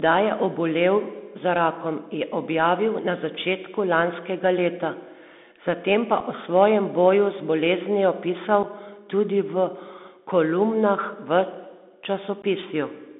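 Bluetooth CVSD headset codec, throughout the speech: the sound has been squeezed into a narrow telephone band running from about 200 Hz to 3.6 kHz, which fits a 64 kbps CVSD link. This codec sends a single up-or-down bit per sample and adapts its step size as it goes. When the level climbs quickly at high frequencies, the step can't keep pace, so sibilants turn scratchy and loud bright moments distort. A fine granular hiss sits beneath the voice the whole time.

Unconcealed Bluetooth headset packet loss, at 6.20 s, 8.63 s and 12.42–12.44 s: voice packets travelling between headset and phone went missing, and nothing was done to cover the gaps. The first two holes each last 7.5 ms, about one packet apiece. The third lasts 15 ms, roughly two packets. Each dropout cuts in and out with hard edges, leaving a brief break in the speech. Because the CVSD decoder has to rebuild its step size afterwards, the speech returns quieter for a moment.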